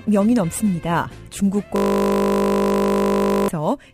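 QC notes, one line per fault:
Throughout: sample clock jitter. Timing wobble of a few microseconds in the converter clock lands samples slightly off their proper instants. The resulting error, roughly 30 dB below the signal, follows waveform slope, so a grainy hiss rides on loud and bright passages and disappears in quiet.
1.76 to 3.49 s: system hang loop. The host stalled while the output hardware kept replaying one 20 ms stretch of its ring buffer, around 86 times. A segment this short repeats fast enough to fuse into a steady 50 Hz buzz rather than a stutter.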